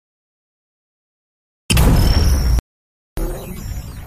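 At 2.59 s the sound cuts off abruptly and the clip falls into total silence until 3.17 s. That is an audio dropout to silence lasting about 0.58 s. The gap is silent, with no room tone or hiss underneath. Whatever was happening during that stretch is simply gone. The sound then resumes mid-flow, just as abruptly. The likely cause is a brief loss of the input signal, such as a disconnect or stray mute, while recording continued.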